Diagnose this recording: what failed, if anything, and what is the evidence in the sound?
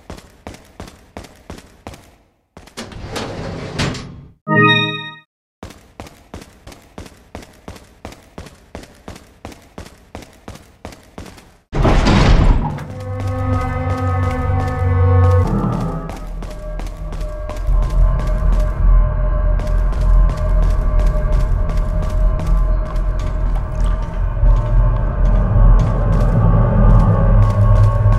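Nothing in the signal chain points to a failure at any stage, from wiring and conversion through to storage and playback.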